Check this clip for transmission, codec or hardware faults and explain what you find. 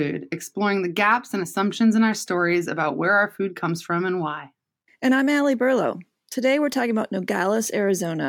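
No faults turn up anywhere in the clip.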